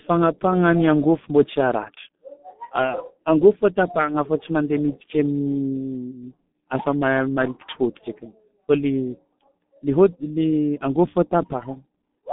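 From start to finish the speech has gone through a G.723.1 codec, and it's heavily mangled. The band sits at roughly 150 Hz to 3.6 kHz with nothing at all above 3.8 kHz, so everything sounds boxed-in and muffled. The coarse 30 ms frames and the slow-moving voice model leave a hoarse texture, and consonants smear together, which fits the 6.3 kbit/s mode of that codec.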